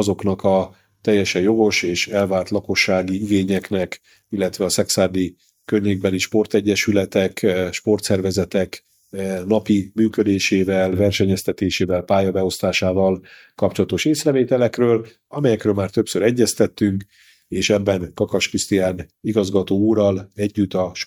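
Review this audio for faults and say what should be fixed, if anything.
No faults can be heard anywhere in this audio, so there is nothing that needs fixing. No repair or change to the signal chain is called for.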